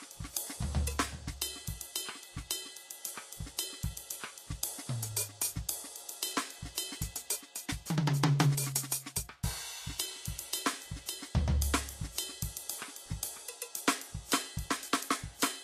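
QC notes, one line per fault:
Throughout: Vorbis compression, plainly audible across the music. Nothing is heard above 14.2 kHz. The upper treble turns hissy and grainy, with tones roughened and attacks smeared, as coarse quantisation swaps fine detail for noise. This likely comes from a low-rate Vorbis encode, around 37 kbps.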